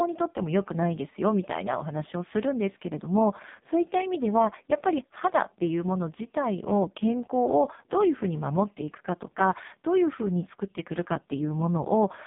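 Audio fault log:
throughout, AMR narrowband mobile codec: speech is held to a 150 Hz to 3.7 kHz line band with nothing above 3.8 kHz, and heavy coding damage makes it buzzy and synthetic. This fits the lowest 4.75 kbps mode, where sparse pulses drive a vocal-tract model.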